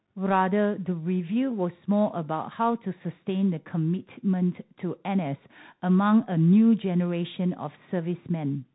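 Throughout the speech, the signal has passed through a Bluetooth CVSD headset codec, a one-bit delta modulator with an adapting step size, which fits a 64 kbps stream. Nothing above 4 kHz survives, s sounds turn scratchy, loud high passages distort, and granular hiss runs underneath.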